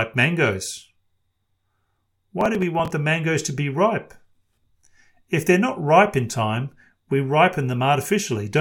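Speech clip with processor overload crackle from 2.41 to 2.91 s, just before "the mangoes to be": about fifteen skipped buffers of roughly 5 ms leave hard-edged gaps that sound like gritty tearing.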